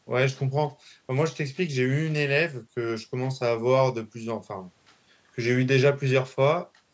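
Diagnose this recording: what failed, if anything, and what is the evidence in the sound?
Nothing failed: the speech has passed through ordinary call microphone processing, whose high-pass filter trims the lowest bass and whose band stops at 8 kHz, both normal for that stage.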